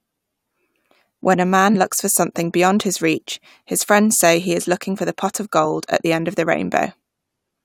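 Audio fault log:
1.74 s and 5.64 s, damaged data in a compressed stream: two short glitches of under 20 ms, the first just before "looks for something beyond", the second between "for the pot of" and "at the end of". Each is a brief break in the speech. Corrupted bytes make the decoder misread the frames at those points. It loses sync and resumes only when it finds a valid frame header, so the output briefly breaks up.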